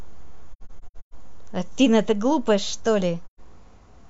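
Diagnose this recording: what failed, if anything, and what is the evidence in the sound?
The failure is at the codec stage, seen as AAC frame loss with muting. From 0.52 to 1.14 s the speech drops out in several soft-edged holes totalling 384 ms, the longest around 150 ms, which fits nine lost frames of about 43 ms each. A second 128 ms hole at 3.25 to 3.40 s fits three frames. The decoder zeroed the missing spectra, and the overlapping windows fade each gap out and in. A spectrogram shows full-band blank columns with tapered edges, and the waveform shows smooth envelope dips to silence.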